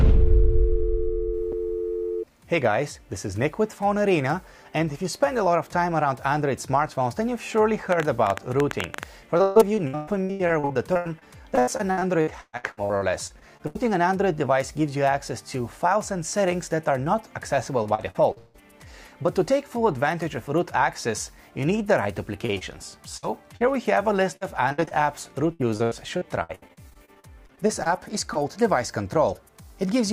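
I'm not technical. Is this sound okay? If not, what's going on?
No. A block of digital silence hits at 1.52 s: about 6 milliseconds of sound drop out to nothing and snap back, leaving a tiny tick. The program didn't deliver its next chunk of audio in time, which fits a 256-sample buffer.

A train of clicks runs from 7.92 s to 9.04 s: about fifteen similar clicks, roughly eleven per second at an uneven pace, ticking over the sound. The likely cause is interference from nearby equipment or a faulty connection or power supply.

Repeated packet loss (robotic sound) appears from 9.37 s to 13.77 s, 17.83 s to 18.56 s, 22.46 s to 23.62 s, and 24.36 s to 28.37 s. Pieces of audio kept arriving late or not at all, and each gap, up to 158 milliseconds, was patched by stretching the previous sound, giving a choppy effect with pieces missing.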